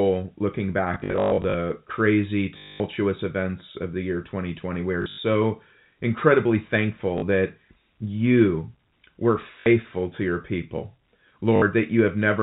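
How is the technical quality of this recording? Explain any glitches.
The recording has repeated bursts of robotic stutter on top of a telephone-band sound, with nothing above 4 kHz from its G.711 coding.

The stutters come at 0.94 to 1.54 s, 2.58 to 2.8 s (just before "events of the year"), 5.02 to 5.18 s, 7.18 to 7.22 s (before "that you were"), 9.6 to 9.66 s (between "that you were" and "to your people") and 11.56 to 11.62 s. This is packet loss with the last packet repeated. Audio went missing and the receiver replayed the last chunk until fresh data arrived. The replays seldom line up with the pitch, and longer runs buzz at about 50 Hz, which fits 20 ms packets. The first burst is the worst, with about 360 ms of loss scattered over 600 ms.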